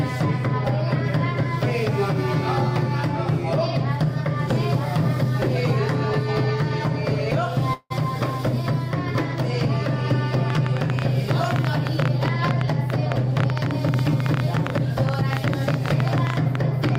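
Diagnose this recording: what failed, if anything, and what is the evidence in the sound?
A call audio freeze occurs at 7.73 s and lasts until 7.92 s. The sound stops moving forward and the last moment is stretched into a fading tail for about 170 ms, with roughly 30 ms of near-silence at its end. The audio then resumes where it left off, so nothing is lost and the delay grows by about 170 ms. The stage is likely the network, with delayed packets draining the jitter buffer.

A train of clicks starts at 10.50 s and runs to the end of the clip. Sharp, similar pulses arrive about 10.5 times per second at an uneven spacing. They stand clearly above the sound and are audible in quiet moments too. The stage is likely the analogue wiring or interface, with nearby equipment or a faulty connection or power supply injecting repeated impulses. The uneven spacing points away from a fixed buffer clock.

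A jitter buffer speed-up runs from 12.18 s to 15.15 s. Over those three seconds the sound plays at about 105% of normal speed with unchanged pitch, so it feels slightly hurried. In total, roughly 150 ms is removed. The stage is call processing in the receiver. After packets arrived in a bunch, the receiver trimmed short pitch-period slices many times in a row to bring the buffer back down to its target depth.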